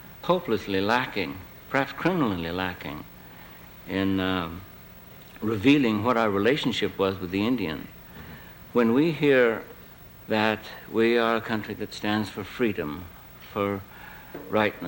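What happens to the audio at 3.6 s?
Nothing goes wrong at 3.6 s: the audio runs on intact there, with no dropout, click or distortion at that point.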